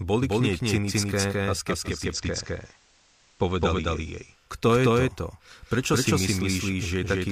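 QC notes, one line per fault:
Throughout, doubled audio track: a second full-band copy of the speech runs about a fifth of a second behind the first, at much the same level, so every syllable is followed by a clean, dry repeat with no decay or room colour. This is likely a second capture path running slower than the first, mixed back in alongside it.
1.81 to 4.58 s, digital radio blending to analogue: just after "k nej cynické a", the receiver loses the digital stream and cross-fades over about 0.37 s to the FM broadcast of the same station. Hiss rises well below the speech, and the level shifts by about 1 dB. The receiver blends back to digital in the same way just before "je to".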